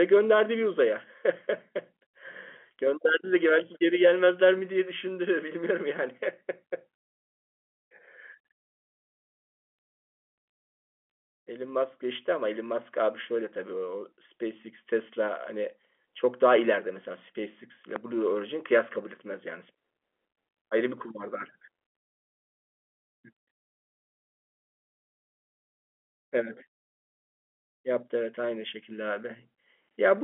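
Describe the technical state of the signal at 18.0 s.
A loud pop occupies 17.96 to 17.98 s, a single sharp click standing roughly 15 dB above the speech, which carries on beneath it. It is likely an electrical transient, such as a plug, switch or static discharge, injecting a brief voltage pulse that the downstream circuitry shapes into an audible thump. The surrounding telephone-band audio, cut off near 3.8 kHz by the G.711 coding, continues through the event.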